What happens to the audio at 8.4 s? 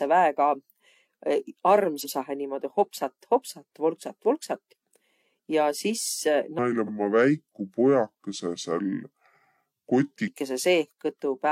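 A section at the wrong speed, 6.59–10.28 s at 0.72x, likely a clock mismatch: speech drags and drops about five semitones, spectrogram harmonics sit lower, waveform stretched.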